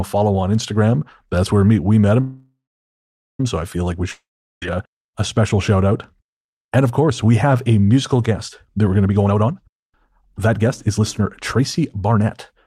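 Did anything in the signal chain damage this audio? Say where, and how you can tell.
Yes. A call audio freeze at 2.20–3.40 s, likely from delayed packets: after "where we met" a fading buzz, then about 0.8 s of blank spectrogram, resuming with nothing lost at "so I feel like".

A long network dropout at 4.11–4.63 s: after "I feel like we" comes a short decaying tail, then flat waveform; about half a second is missing before "uh a special shout".

A jitter buffer speed-up from 9.06 to 12.54 s, after "that we're going to": the buffer repeatedly cuts pitch periods, so the audio runs at 120% speed. Waveform cycles vanish while the spectrogram's harmonics stay level.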